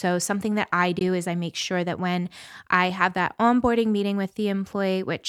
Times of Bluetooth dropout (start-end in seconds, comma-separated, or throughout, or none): 0.99-1.01